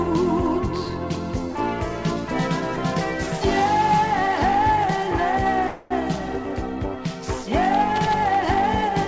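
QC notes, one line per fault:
5.68–5.92 s, call audio freeze: the last sound is stretched into a fading fill for 0.23 s, likely because delayed packets emptied the jitter buffer. The audio then resumes later, with nothing lost.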